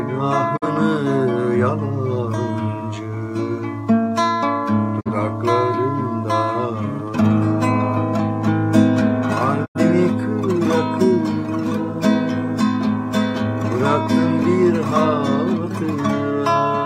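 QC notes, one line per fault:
0.56–0.67 s, 4.99–5.11 s and 9.64–9.80 s: digital broadcast dropout. The receiver mutes with a quick 20 ms fade each time. The first two holes fit one lost 43 ms frame, the third two frames (about 85 ms). Whatever was sent there is gone.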